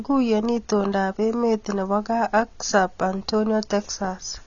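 Throughout, the speech has likely passed through low-bitrate AAC compression, heavy AAC-LC coding consistent with about 24 kbps. The encoder discards everything above 7 kHz and starves the remaining bands, leaving the sound plainly dull and smeared, with fizzy, warbling sibilants.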